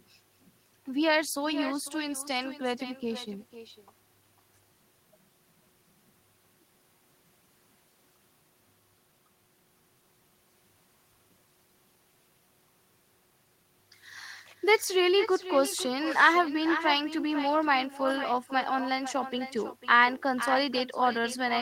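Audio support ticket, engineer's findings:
Echo with no canceller, whole clip. Every phrase of the speech comes back around half a second later, about 11 dB down, thinner. Far end is on loudspeaker, mic picks it up, nothing cancels it before return.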